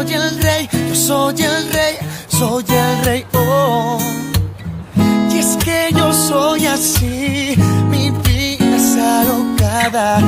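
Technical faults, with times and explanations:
Nothing technical goes wrong anywhere in this one, so there's nothing to list here.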